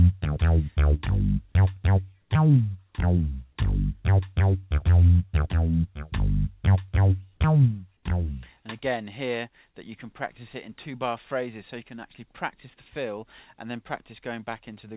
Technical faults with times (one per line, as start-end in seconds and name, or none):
2.21-2.30 comfort noise in place of the background